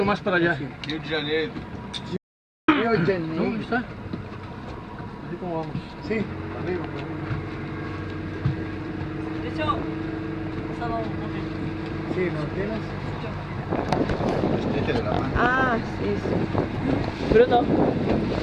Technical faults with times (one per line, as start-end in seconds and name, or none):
2.17-2.68 audio dropout to silence